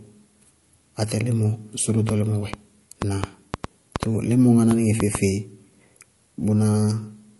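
From start to finish, the speech carries plainly audible codec damage, likely from MP3 compression. Nothing is present above 11.3 kHz, so the top of the treble is simply missing. The damage fits a low bitrate of around 48 kbps. With so few bits, the encoder drops weak frequency lines, and they flicker on and off from frame to frame. The result is a watery, swirly texture, and attacks sound smeared.

From 2.09 s to 5.16 s, a train of clicks runs over the speech. There are about ten of them, roughly 3.3 per second. The spacing is irregular, not steady. Each click is much the same short pulse, standing around 15 dB above the speech. They come across as ticking or popping on top of the sound. The likely source is interference from nearby equipment, or a faulty connection or power supply.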